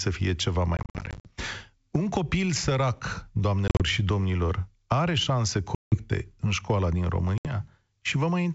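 Speech over a G.722 wideband call at 64 kbit/s, hit by packet loss on an ADPCM call at 0.77–1.31, 3.68–3.81, 5.75–6.02 and 7.38–7.51 s. Each shows as hard-edged silent gaps in the waveform, where the decoder's predictor loses step, followed by speech that returns slightly distorted.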